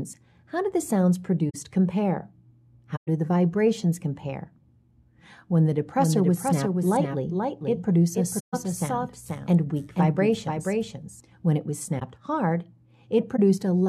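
At 1.50 to 1.55 s and 2.96 to 3.08 s, short soft-edged holes or smears appear: corrupt frame concealment, where the decoder detected damaged AAC frames and covered them. From 5.98 to 11.20 s a second full-band copy trails about half a second behind, about 5 dB quieter and dry, starting and stopping abruptly. This doubled audio track likely comes from a second, slower capture path or an edit holding two out-of-step copies. Within it, at 8.39 to 8.54 s, comes another concealed-frame smear, and two brief ones follow at 11.99 to 12.02 s and 13.36 to 13.39 s.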